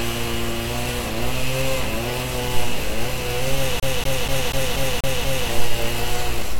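From 3.80 to 5.49 s the CD is stuck on one turn: a scratch keeps throwing the laser back, so the same 0.24 s of sound repeats seven times with a brief mute at each jump. The waveform shows identical blocks separated by thin gaps, and the spectrogram shows a matching repeated pattern.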